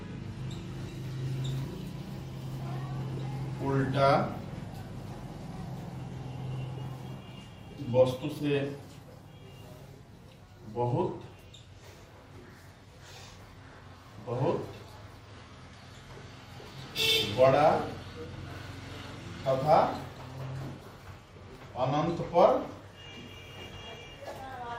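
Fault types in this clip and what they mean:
No technical faults are audible.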